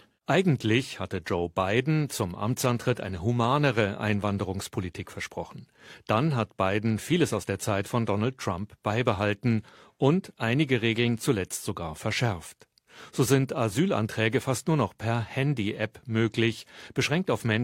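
No faults detected anywhere in the recording.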